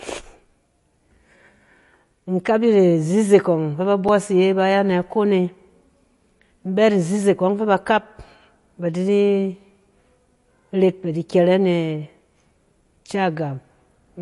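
A speech recording with audible compression damage throughout. Nothing is present above 11.3 kHz, so the top of the sound is cut off flat. The damage is plainly audible. Weak high detail flickers in and out, giving sibilants a watery, swirly edge, and consonant attacks are smeared. This is likely MP3 compression at a low bitrate, around 48 kbps. Too few bits force the encoder to drop the treble and discard quiet frequency components.

At 4.08 s there is a block of digital silence lasting 5.8 ms. The signal drops straight to silence and returns with no fade. Both edges are abrupt, so the gap is heard as a tick or dip rather than a hole. A block this short fits a 256-sample buffer that was not filled in time.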